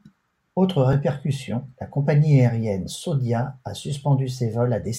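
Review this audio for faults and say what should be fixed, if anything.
A repeated buffer at 0.93 s: the next block of audio arrived late, so the playback device played its last block of speech one extra time. The repeated piece is very short, which fits a 10 ms buffer, so it comes across as a brief click rather than a stutter, and no speech seems to go missing. To prevent this, give the audio path more headroom, with a larger buffer or higher scheduling priority, so each block arrives before the device needs it.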